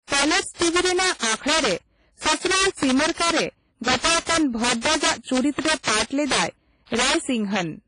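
Integer overflow runs throughout the speech. Gain pushed peaks about 10 dB past the limit, so roughly one sample in twenty wraps to the opposite sign, giving sharp cracks on loud peaks.

Heavy washy, ringing damage with signal-following hiss also runs throughout, and nothing sounds above 10.1 kHz. This is likely WMA compression, fitting a low bitrate near 24 kbps.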